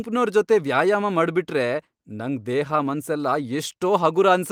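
Nothing in this bit of speech stands out as a technical problem; it runs along with no audible glitches or interruptions anywhere.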